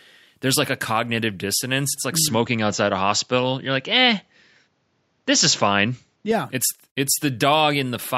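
A speech clip. Just after "like mm", at 2.28 s, the sound narrows abruptly, with nothing above 7.6 kHz. The level shifts by a few dB and a faint new background appears. At 6.31 s it clears again. No gap marks either change. The likely cause is the input switched to a poorer device.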